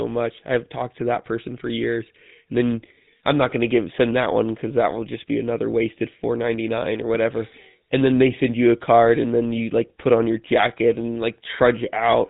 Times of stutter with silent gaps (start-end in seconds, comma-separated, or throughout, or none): none